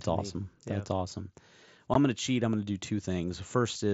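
At 1.94 s the speech has a 15 ms hole: unconcealed Bluetooth headset packet loss, which fits two lost 7.5 ms mSBC frames. Nothing conceals the missing audio, so it drops out with abrupt edges rather than the smeared repeat of concealed loss.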